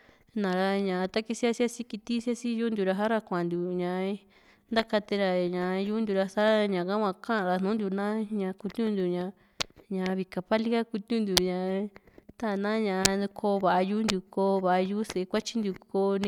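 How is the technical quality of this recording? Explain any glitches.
The technical quality of this recording is good, with no glitches to explain.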